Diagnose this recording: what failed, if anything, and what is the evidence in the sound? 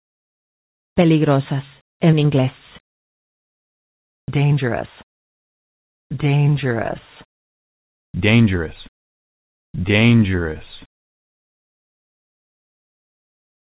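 At 2.94 to 4.28 s and again at 7.38 to 8.14 s, the quiet background between sounds gives way to a steady, featureless hiss lacking the texture of the real floor, which sits about 65 dB below the loudest passages. The first gap is about 1 dB different in level from the surrounding background; the second differs by about 11 dB. This is comfort noise in place of the background, likely from discontinuous transmission in call processing: the sender paused and the receiver synthesised noise, all within the call path's 4 kHz bandwidth.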